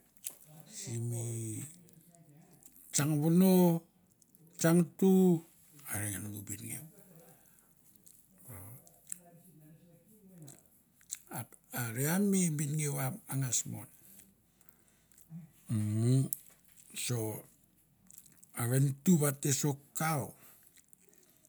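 Nothing is technically wrong with the speech in this clip, and there are no times or causes to report.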